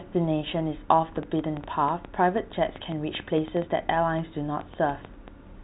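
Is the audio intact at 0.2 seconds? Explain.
Yes, the audio is intact at 0.2 seconds, with no fault present at that moment.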